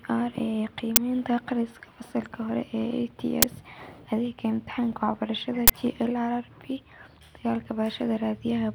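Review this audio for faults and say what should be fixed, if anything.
Uninitialised buffer bursts at 0.96 s and 3.42 s, and from 5.68 to 5.70 s: short, harsh digital noise where blocks played before the speech was written, fitting 512- and 1024-sample buffers. Fix this by zero-filling every buffer on allocation and outputting only blocks the audio callback has actually written.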